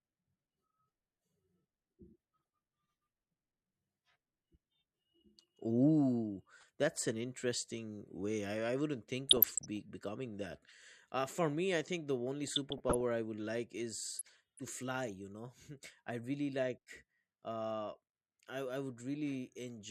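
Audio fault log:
2.45–2.48 s, 6.61–6.64 s, 9.27–9.77 s, 12.48–13.01 s and 14.16–14.59 s: DAB burbling over the speech, brief at the first two times and longer at the last three. Weak reception let a fraction of a percent of bits through uncorrected. The damaged MP2 samples put short blips of noise in single sub-bands, and damaged scale factors make sub-bands jump in level for up to a frame, producing the burbling.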